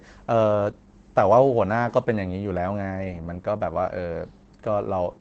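Opus voice compression runs throughout: nothing sounds above 8.5 kHz, and coarse excitation makes the speech hoarse and slightly robotic, unlike a plain low-pass, fitting roughly 12 kbps.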